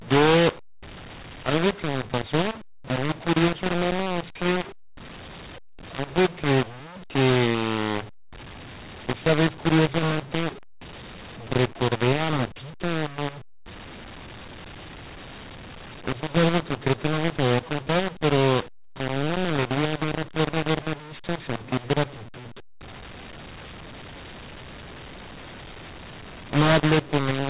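From the start to the end of the speech, mu-law and A-law are mixed up: samples coded with the mu-law G.711 curve are expanded with the A-law curve, so levels are scrambled, the speech turns harsh and gritty, and pauses fill with hiss. The band stops near 4 kHz, consistent with 8 kHz telephone sampling.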